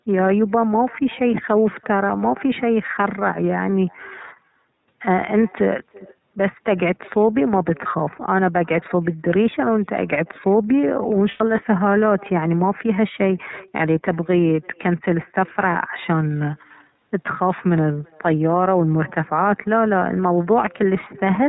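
The clip is speech carried over a call. A faint echo follows everything said, about 27 dB below the speech and roughly 300 ms late. It sounds thin. This is echo with no canceller: the far end's loudspeaker fed its microphone, and nothing removed it. The whole clip is coded with the iLBC codec. Nothing above 4 kHz survives. The speech is clear but rough and slightly synthetic. The damage is plainly audible. It fits iLBC's 30 ms frame mode at about 13.3 kbps. Lost iLBC frames break the sound twice. From 11.31 to 11.41 s, 90 ms becomes a held, buzzy vowel, which fits three lost frames. At 13.76 s a 30 ms gap, likely one lost frame, does the same. The decoder repeated the last pitch cycle with added noise. The speech recovers at once afterwards.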